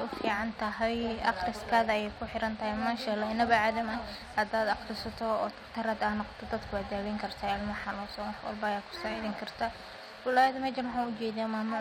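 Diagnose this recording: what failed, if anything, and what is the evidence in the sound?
A gritty, inharmonic fizz rides on the speech for the whole recording, strongest on loud passages and sibilants, sitting roughly 30 dB below the voice. This is crude rate conversion at the sample-rate conversion stage: 48 kHz audio was brought to 44.1 kHz by dropping samples without filtering, leaving a periodic error with spurious tones.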